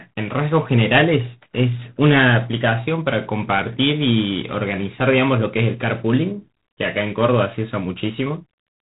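From start to finish the speech runs through G.726 ADPCM coding, with harsh, rasping hiss riding on every syllable, which fits the 24 kbit/s mode. Coarse difference coding leaves level-tracking noise, and a spectrogram shows nothing above 3.9 kHz, with grainy energy filling gaps between harmonics.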